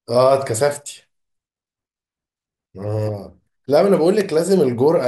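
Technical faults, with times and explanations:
0.94 s, dropped buffer (overrun): a jump in the speech, with the sound jumping slightly forward as if a sliver of audio were snipped out, roughly 10 ms of it. The likely cause is that the capture side fell behind and the hardware overwrote a block before it was read, so the audio on either side is butted together. Unlike an underrun or dropout, there is no gap of silence, only the abrupt discontinuity.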